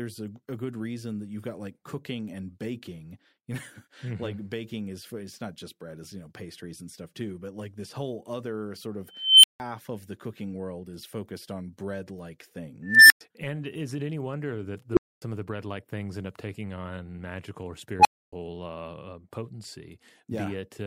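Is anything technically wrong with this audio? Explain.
Yes. The speech has an unstable filter fault at 9.11 to 9.60 s, 12.83 to 13.21 s, 14.92 to 15.22 s and 18.00 to 18.33 s. A recursive filter with bad coefficients feeds its output back until it runs away. Each time, a tone swells to a very loud squeal and then drops out into a short silence: around 3 kHz (326 ms build-up, 165 ms gap), around 2 kHz (274 ms, 107 ms), around 400 Hz (52 ms, 250 ms), and around 1 kHz (53 ms, 276 ms). A spectrogram shows a thin horizontal line brightening, then a blank column. A waveform shows a growing envelope, then a flat gap.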